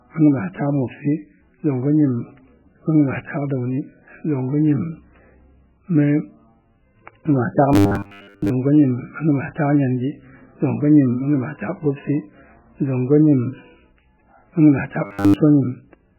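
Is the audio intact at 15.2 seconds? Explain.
No. From 15.06 to 15.36 s the speech collapses into a rigid, metallic buzz at 100 Hz that only loosely tracks the syllables. This is robotic sound from repeated short buffers, likely caused by audio arriving too seldom: the last 10 ms segment keeps replaying, and most of the real signal in that span is skipped.

Under this, and throughout the clip, the sound is muffled and watery, with heavy swirling artefacts. That points to MP3 compression, likely at a very low bitrate around 8 kbps, where the encoder cuts the treble and lets weak frequency components flicker from frame to frame.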